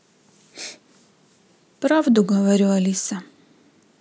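No technical faults are audible anywhere in the speech recording.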